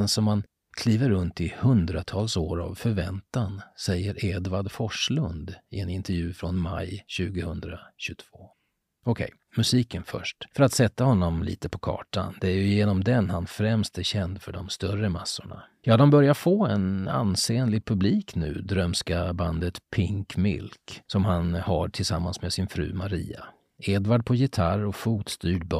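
No technical faults can be heard anywhere in the recording, and the signal holds steady throughout.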